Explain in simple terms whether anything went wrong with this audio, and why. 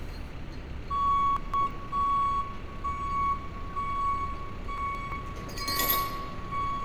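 Two spots sound jumbled, at 1.37 to 1.71 s and 4.78 to 5.12 s. These are chunks out of order: a slice of about 0.17 s arrived one chunk late and played after the piece meant to follow it. Nothing's missing, just shuffled, with three hard joins each time.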